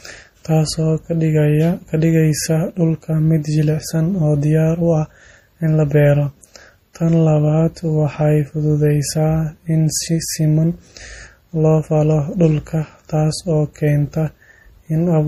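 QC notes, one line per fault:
Throughout: MP3 compression. The speech has a watery, swirling texture that is plainly audible, and nothing sounds above 15.2 kHz. The likely cause is an MP3 encoder starved of bits, which fits a low bitrate around 40 kbps. It trims the treble at a fixed cutoff. It also drops quiet frequency lines when they seem unimportant. Those lines flicker on and off between frames, and that flicker makes the swirl.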